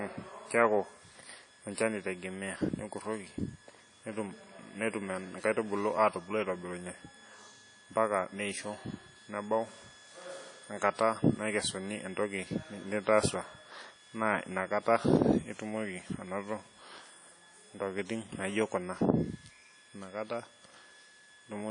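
The speech sounds washy and ringing throughout, with hiss that breathes alongside it and nothing above 10.1 kHz, likely from WMA compression at a low bitrate near 32 kbps.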